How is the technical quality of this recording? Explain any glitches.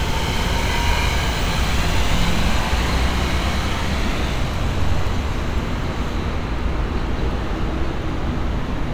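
The technical quality of the recording is sound, with no glitches to explain.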